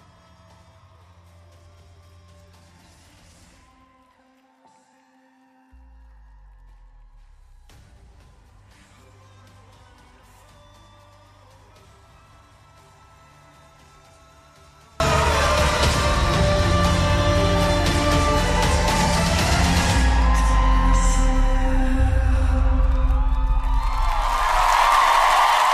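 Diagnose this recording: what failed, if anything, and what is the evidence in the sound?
From 0.0 to 15.0 s the mono sum falls by about 32 dB. One channel inverted, likely a reversed analogue wire, cancels the shared content.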